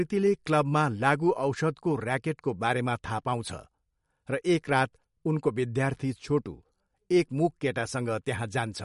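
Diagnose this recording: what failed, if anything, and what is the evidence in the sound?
The damage happens at the codec stage, most likely MP3 compression. Across the whole speech clip, nothing survives above 11.2 kHz, a hard treble ceiling the encoder sets when it's short on bits. Plainly audible swirly, watery texture runs throughout too, because weak frequency lines get zeroed and flicker on and off from frame to frame. That pattern points to a fairly starved encode, something around 54 kbps.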